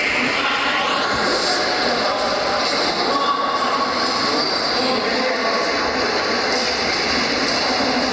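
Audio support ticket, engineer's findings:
Gain pumping, whole clip: level ducks hard under each loud sound, roughly a 10 dB swing. Likely input gain set way too hot, with a fast limiter or compressor clamping down on peaks. Dynamics squashed flat. Call mic processing audible in the clean low cut and nothing above 8 kHz.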